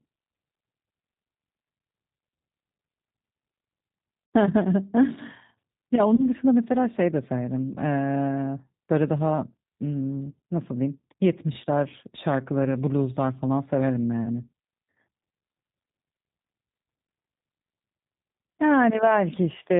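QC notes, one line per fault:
throughout: G.729 codec. The speech is intelligible but plainly rough and synthetic, with a band-limited quality and nothing audible above 4 kHz. That sound fits an 8 kbit/s G.729A stream. The decoder rebuilds each 10 ms frame from a vocal tract filter, a pitch predictor and a few coded pulses rather than the actual waveform, so natural texture and breath detail are lost.
4.26–4.32 s, 6.15–6.27 s and 12.64 s: VoIP packet loss concealed by the speech codec. At each point the speech briefly stretches into a fading sound and then comes back weak or distorted. The first gap spans about 60 ms, the second about 30 ms and the last about 10 ms. The decoder filled each gap by extending its last pitch and filter settings with falling gain, and because every frame builds on the one before, the recovery lags after packets resume.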